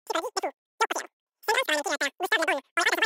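From start to finish the clip has a wrong sample rate fault. Everything runs exactly three times too fast and about 19 semitones too high, which fits audio recorded at 16 kHz but played back at 48 kHz with no conversion. The sound is shrill and chattering. On a spectrogram every feature is squeezed to a third of its length and stretched upward threefold, so content that belonged below 8 kHz now reaches 24 kHz. The waveform shows compressed, rapid envelopes.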